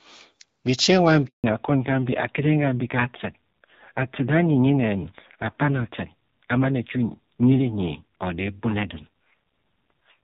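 Right after "bichi ewa", at 1.26 s, the speech cuts out for 180 ms until 1.44 s. That's a handover gap: the call jumped between networks, no speech frames made it through the switch, and whatever was said in that window is simply gone.

From 1.44 s to the end there's a fallback to narrowband. Before the gap the speech sounds like clean HD Voice at AMR-WB's 12.65 kbit/s rate. Afterwards nothing comes through above 4 kHz, and the voice turns dull and rough, which fits AMR-NB at about 5.9 kbit/s.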